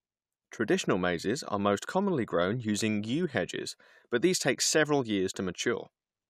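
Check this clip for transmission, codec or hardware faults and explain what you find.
No transmission, codec or hardware faults can be heard anywhere in the speech.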